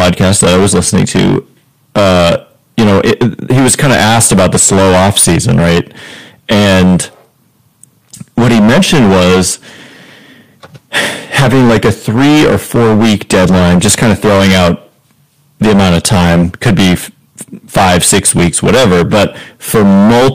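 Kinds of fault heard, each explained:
Hard clipping: the speech is driven about 21 dB beyond what a stage in the chain can pass, so every peak is sliced flat at the ceiling, and around a fifth of the waveform sits pinned there. Those squared-off tops generate dense high-order harmonics, so rather than occasional crackle the whole 20-second recording carries a harsh, buzzing fuzz on every loud sound.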